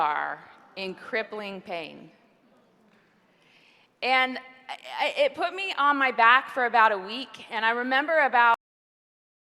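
At 8.54 s there's a cut-off end: the sound stops mid-event and drops straight to digital silence with no natural decay, and it stays silent for the last second or so. The final buffers never got written out or played back.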